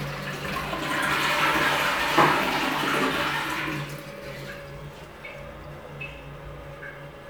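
No technical faults can be heard anywhere in this recording of sounds. Nothing in the audio points to a problem in how it was captured or delivered.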